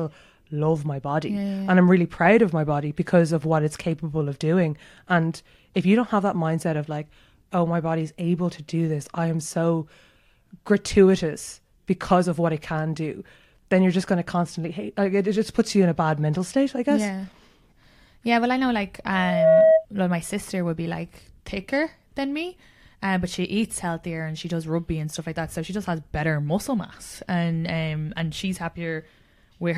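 At 19.12 s there's a loudspeaker feedback squeal: a single tone at 641 Hz that swells up over about 0.4 s until it sits something like 10 dB above the speech, then stops at 19.86 s. What's going on is the mic catching the speaker it feeds, with the loop gain tipping past one at that frequency, so the tone keeps feeding itself and climbing until the amplifier limits it or the loop gets broken.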